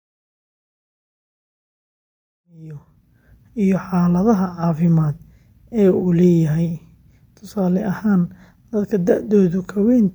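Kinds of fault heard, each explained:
No faults heard; the speech rises gently from about 2.5 s to full level at 3.41 s, an ordinary editor's fade-in with no click or hard edge.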